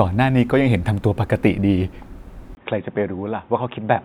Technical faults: input switched to a poorer device

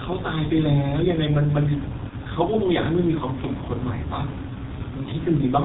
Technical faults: G.723.1 codec; VoIP packet loss concealed by the speech codec

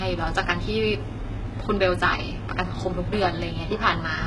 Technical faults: HE-AAC compression

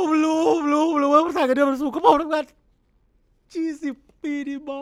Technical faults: none

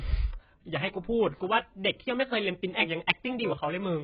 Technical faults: AAC compression

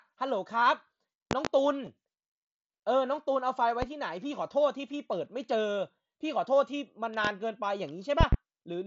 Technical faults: loud pop; concealed Bluetooth headset packet loss

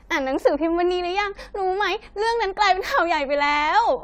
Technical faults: generation loss

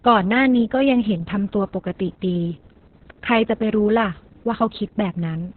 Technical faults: Opus voice compression

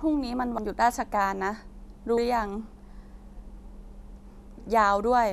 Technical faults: compressed frames skipped

